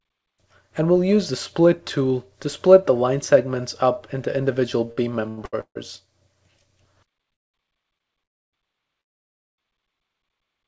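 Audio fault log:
4.92–5.78 s, repeated stalls (stutter): the sound drags and hiccups through four held gaps, the longest about 148 ms, as the jitter buffer kept running dry. Nothing is lost.
7.32–7.57 s, 8.24–8.56 s, 9.01–9.61 s, call audio freeze: the sound fades into silences of about 210, 280 and 570 ms, then resumes where it stopped. The likely cause is late packets emptying the jitter buffer.
7.98 s, short stall from a late packet: a sound is held about 25 ms too long with a slight buzz or dip, stretched until the overdue packet arrived.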